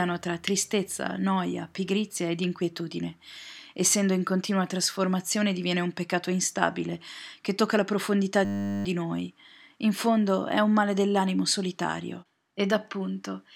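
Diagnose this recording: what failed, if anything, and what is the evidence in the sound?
Driver or buffer stage: a system hang loop right after "che tocca la profondità", 8.45 to 8.85 s. A 10 ms slice repeats, giving a steady 100 Hz buzz while the speech drops out.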